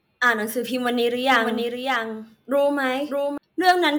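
From 1.32 s to 3.38 s the speech is joined by a somewhat quieter, full-band copy of itself trailing roughly 0.7 s behind. It has no reverberant tail and cuts in and out abruptly. This doubled audio track likely comes from a second, slower capture path mixed in.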